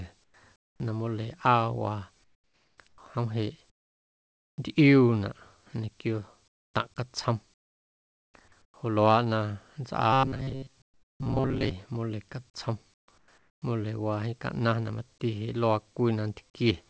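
Whenever the sender's voice detector judged a pause to be silent, it likely stopped transmitting, and the receiver filled the gap with synthetic noise. This comfort noise in place of the background appears at 0.24–0.80, 2.24–2.98, 3.70–4.58, 6.48–6.74, 7.54–8.34, 8.62–8.74, 10.82–11.20 and 12.94–13.62 s. The real room tone gives way to a flat, featureless hiss that is about 12 to 27 dB quieter in several of these pauses.

From 10.13 to 11.71 s, new audio arrived too seldom, and the receiver likely kept replaying a short buffer of about 7.5 ms, skipping the real signal for most of that stretch. That is robotic sound from repeated short buffers. The repetition imposes a fixed 133 Hz buzz, so the speech turns metallic and droning while still loosely following its shape. The G.722 call path, with nothing above 8 kHz, adds its usual coding noise.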